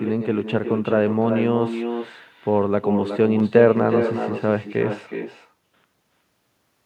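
From the first moment to the last, the speech carries echo with no canceller: the far end's loudspeaker feeds its microphone, and nothing strips that out. So every phrase returns roughly 400 ms later, about 7 dB quieter and thinner, trailing the talker like a shadow.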